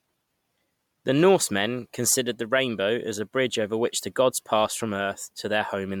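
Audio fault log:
Throughout: generation loss. The speech sounds swirly, hollow and smeared, with soft, blurred consonant attacks, and the top end stops near 19.9 kHz. That's likely MP3 re-encoded around seven times, fitting roughly 128 kbit/s, each pass stacking fresh quantisation noise and spectral holes.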